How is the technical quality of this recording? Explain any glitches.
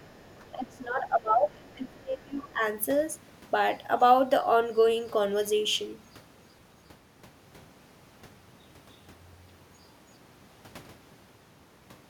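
The quality is compromised in the first few seconds by echo-canceller problems while both sides talk at once.

Speech suppressed in double talk occurs briefly from 0.0 to 0.06 s, dipping roughly 10 dB, then heavily from 0.39 to 2.62 s, dropping as much as 20 dB. The likely cause is the canceller mistaking the talker for loudspeaker echo and attenuating both. On a waveform the envelope sags in ragged chunks, and a spectrogram shows the upper bands thinning.

The other side's voice leaking through appears from 0.05 to 0.5 s, 1.74 to 1.92 s and 2.43 to 2.49 s. It is faint: roughly 35, 40 and 25 dB below the speech. The likely cause is loudspeaker playback that the canceller didn't fully remove. It is visible on a spectrogram as weak harmonic traces.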